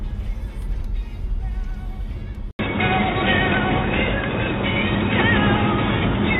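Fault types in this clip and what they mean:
Input switched to a poorer device: At 2.51 s the audio drops out for about 80 ms, then carries on to the end duller and boxier, with nothing above 3.8 kHz, a level shift of roughly 5 dB and a new noise floor about 30 dB under the signal. This is likely a change of capture device. The gap, the fresh background noise and the level jump mark it apart from a plain low-pass filter or codec bandwidth drop.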